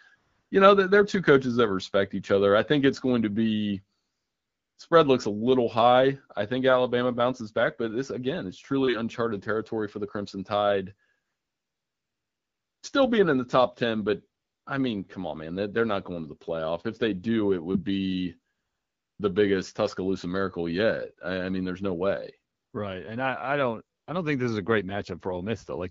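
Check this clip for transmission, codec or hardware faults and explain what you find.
The clip shows one recurring transmission fault, AMR comfort noise, heard seven times in this speech recording. The underlying wideband phone coding sounds light and clear, which fits a rate of around 12.65 kbit/s.

AMR comfort noise occurs at 0.15–0.51 s, 3.99–4.77 s (after "it's going to be", before "spread looks a little"), 11.25–12.81 s, 14.41–14.65 s, 18.53–19.19 s (after "do it would be", before "the biggest"), 22.55–22.73 s (after "mean there's no way") and 23.97–24.07 s. In each gap, lasting from 100 ms up to 1.56 s, the sending phone decided nobody was talking and stopped transmitting speech frames. The receiver then generated its own noise from a rough sketch of the background's level and spectral shape. The real room sound drops out and a smooth, even hiss switches in, then back out when speech resumes.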